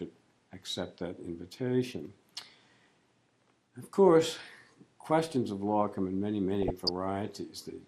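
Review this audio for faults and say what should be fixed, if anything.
Throughout the clip the top end sounds dull and the sound carries a gurgling, granular roughness. This is plainly audible damage, most likely from MP2 compression at a rate that fits about 80 kbps. Layer II divides the signal into 32 equal sub-bands, and with so few bits the upper bands are switched off while the remaining ones are coarsely quantised. On a spectrogram this shows as a hard ceiling with blocky patches flickering on and off beneath it. The fix is to encode at a higher bitrate, or to use a more efficient codec such as AAC.

From 6.62 to 6.90 s there is DAB burbling: a burst of noise blips in single sub-bands over the programme. The sound points to roughly a dozen corrupted frames, consistent with a bit error rate of around half a percent, where errors slipped past error correction into the MP2 data. Wrong scale factors make individual sub-bands jump in level for up to a frame. 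A spectrogram would show isolated bright rectangular tiles, and the waveform would show abrupt level jumps across that span. Better reception, with a stronger signal or a better antenna, or a cleaner source than off-air DAB would prevent it.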